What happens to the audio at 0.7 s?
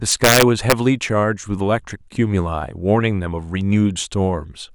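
At 0.7 s the speech is still breaking up with violent, sharp cracks on its loudest moments, far harsher than ordinary clipping. This is integer overflow, running from about 0.12 s to 0.72 s. The signal was pushed roughly 4 dB past the largest value the integer format can hold, and instead of being limited, each peak wrapped around to the opposite sign, so every overshoot flips across the full range and snaps audibly.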